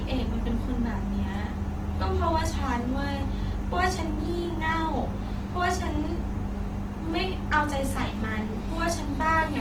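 Across the whole clip the speech sounds rough, grainy and noisy rather than swirling, with plainly audible damage, which points to Opus compression, likely in its music mode at a low rate around 16 kbps. Unlike MP3, bands are noise-filled, not emptied, and content still reaches 20.1 kHz.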